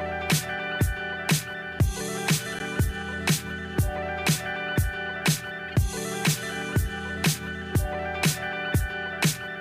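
A brief glitch cuts through at 2.59 to 2.61 s, and a longer, fainter glitch follows at 5.68 to 5.74 s. Both are corrupt frames decoded: flipped bits misplaced energy across a single frame, then roughly three.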